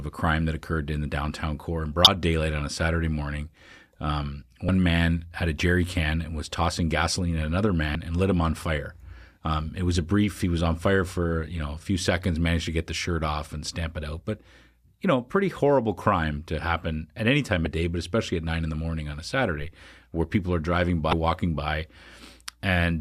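Short chirps and blips cut into the speech at 2.04–2.07, 4.66–4.69, 7.92–7.95, 17.66 and 21.10–21.13 s. This is damaged data in a compressed stream: the decoder misreads corrupted frames and resyncs.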